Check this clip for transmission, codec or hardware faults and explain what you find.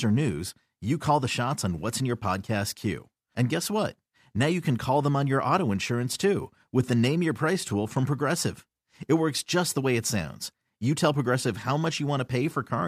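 Nothing in the speech indicates a fault anywhere in the signal chain.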